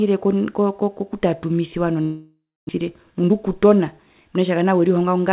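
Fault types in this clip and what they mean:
Long network dropout: From 2.02 to 2.71 s the sound stops being real and turns into a buzzy continuation of the last bit that fades out, with about 0.27 s of plain silence at the end. The likely cause is a stretch where no packets arrived at all, so the receiver papered over the gap and about 0.4 s of the actual speech is simply gone when it picks back up, now running roughly 0.3 s behind.
Jitter buffer speed-up: Right after, from about 2.83 to 5.13 s, the speech runs at roughly 111% speed with the pitch unchanged, so it sounds a bit rushed. That's the receiver working off the extra delay that piled up during the dropout by snipping out tiny pitch-period-sized chunks over and over, trimming roughly 0.3 s in total. The narrow, 4 kHz-limited telephone band throughout fits a G.711 A-law call path.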